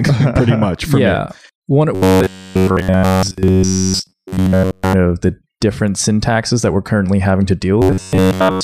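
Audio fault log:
1.95–4.93 s, robotic sound from repeated short buffers: new audio likely arrived too late, so playback kept looping the most recent slice of about 10.7 ms and skipped the real signal for nearly the whole stretch. Each loop restarts at the same rate, imposing a steady 93.8 Hz buzz that flattens the speech into a rigid, metallic tone while its rough shape still comes through.
7.82–8.63 s, robotic sound from repeated short buffers: the same likely starvation returns through to the end, with most of this span repeated rather than new, so the 93.8 Hz metallic buzz is again heard.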